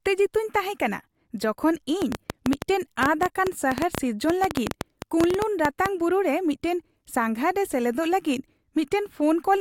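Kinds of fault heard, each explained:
Train of clicks: from 2.02 s to 5.87 s, after "ᱛᱟᱦᱮᱸ ᱠᱟᱱᱟ ᱡᱚᱠᱷᱚᱱ" and until "ᱵᱩᱨᱩ ᱨᱮ", about thirty similar pulses tick over the speech at roughly 8.08 per second, unevenly spaced, peaking about 20 dB above the signal and likely caused by interference or a faulty connection. On the waveform they appear as sharp spikes standing well above the speech envelope. On a spectrogram they form thin vertical lines spanning the full frequency range.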